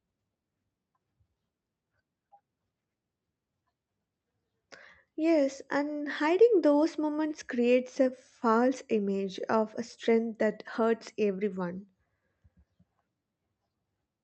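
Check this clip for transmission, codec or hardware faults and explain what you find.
Nothing stood out on listening to this speech clip, which comes through an Opus call path whose band tops out at about 8 kHz.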